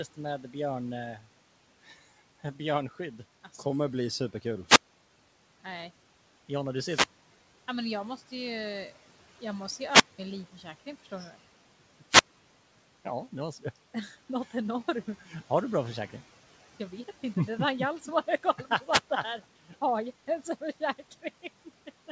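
A speech recording, heard through a call path whose spectrogram shows nothing above 8 kHz, fitting a 64 kbps G.722 link, with steady room noise about 22 dB below the voice. At 1.16 to 1.26 s, speech cut by the noise suppressor swallows roughly a tenth of a second of voice. The suppressor mistakes the speech for background and pulls it down by about 10 dB. On the waveform this shows as a brief dip in the envelope, and on the spectrogram the speech harmonics thin out across the band for that short stretch. Five wireless microphone squelch dropouts follow, at 4.65 to 5.10 s, 6.79 to 7.74 s, 9.85 to 10.19 s, 12.08 to 12.40 s and 18.84 to 19.09 s. In each one the FM radio signal fades and hiss swells until the receiver's squelch gates the output off. The muted holes last 338, 645, 188, 208 and 94 ms. In the waveform they are flat gaps of near silence, bordered by a noisy edge. On the spectrogram they appear as blank vertical columns, preceded by a wash of broadband static.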